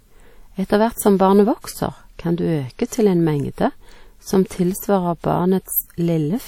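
Throughout this speech clip the sound rings and smears, with a washy hiss that swells and fades with the signal and nothing above 19.4 kHz. The likely cause is WMA compression at a low bitrate, around 48 kbps, whose long transform blocks spread quantisation noise over tens of milliseconds.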